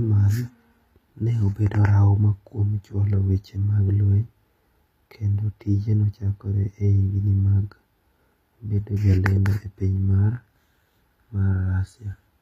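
From start to finish the speech carries plainly audible codec damage. The s sounds come out gritty and lisping, the treble has a metallic sheen that doesn't sit naturally with the lower frequencies, and nothing is present above 15.5 kHz. The likely cause is HE-AAC compression at a low rate, in line with HE-AAC v2 near 24 kbps: the upper band is rebuilt from copied lower bands under a coarse envelope, so its harmonics don't match.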